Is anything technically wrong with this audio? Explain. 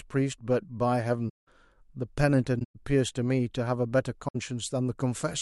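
Yes. Corrupt frames were concealed in three places (8, 7 and 3 frames), at 1.28 to 1.48 s, 2.59 to 2.76 s and 4.28 to 4.36 s. Damaged bits in the AAC stream were caught by the decoder, which replaced the bad frames with muting or a scrambled reuse of the last good spectrum. The concealed stretches of speech last about 0.2, 0.17 and 0.08 s.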